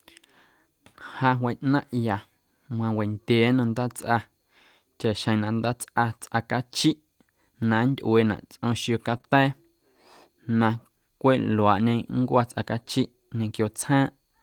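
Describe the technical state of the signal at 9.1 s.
A lost packet rebuilt from error correction runs from 9.09 to 9.15 s. About 40 ms of speech, which fits two separate packets, never arrived. The decoder played the lower-bitrate backup copies carried in the following packets instead, so nothing drops out, but that stretch sounds rougher and grainier than its surroundings.

Right after it, a short concealed packet loss spans 9.17 to 9.21 s. About 20 ms went missing and the receiver filled it by extending the preceding sound before blending back into the real signal. It comes across as a brief smear or wobble.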